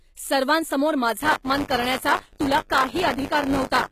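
Across the whole clip, the treble sounds synthetic, and nothing reaches above 14.9 kHz. The likely cause is HE-AAC compression at a low bitrate, around 20 kbps. Band replication rebuilds the top from copied lower bands, so harmonics misalign. Sibilants turn gritty and metallic, and the damage is plainly audible.

From 1.23 s to the end, buffer tearing sets in. The writer and the reader of a ring buffer have slipped. About a tenth of each buffer replays audio roughly 30 ms old, with hard joins. This gives a robotic 100 Hz buzz that follows the speech.

From 1.42 to 1.45 s, pre-echo appears. An attack falls late in a transform block. Quantisation noise sized for the loud part spreads back over 26 ms. A short hiss precedes the onset, and the attack sounds smeared.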